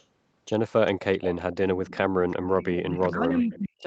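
Right from the start, 0.0 to 0.05 s, there's a very faint echo leak, a copy of the speech trailing the original by about 0.4 s. It comes back more clearly, roughly 20 dB under the speech, at 0.86 to 1.05 s, 1.21 to 1.56 s, 1.87 to 2.01 s, 2.3 to 2.66 s and 3.53 to 3.59 s. The likely cause is that the far end is on a loudspeaker and its echo canceller isn't scrubbing out everything its mic picks up, so the remainder gets sent back down the line.

From 2.08 to 2.2 s the room sound dips by about 8 dB for around a tenth of a second, then comes back. That's the background being gated by the echo canceller: while the loudspeaker is playing, the canceller clamps the mic down hard, and the ambience sags until it lets go.

From 2.83 s to the end, about a second, the talker's speech drops in and out, at its deepest roughly 25 dB down. That's speech suppressed in double talk, likely because both sides are talking at once. 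The canceller can't tell the local voice from the loudspeaker echo, so it turns everything down together, and the speech comes through dented and broken up.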